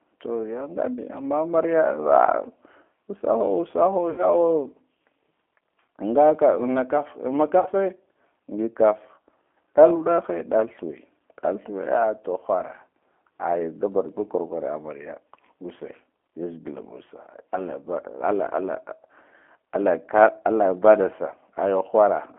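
The whole thing runs through the G.729 codec, so it's band-limited to roughly 250 Hz to 3.4 kHz and has that rough, slightly synthetic 8 kbit/s sheen throughout. At 4.10 to 4.26 s, and again at 7.60 to 7.69 s, you get VoIP packet loss concealed by the speech codec. About 80 ms and 60 ms of audio went missing, and the decoder stretched its last frame into a buzzy tone or coloured noise that fades and takes a moment to recover.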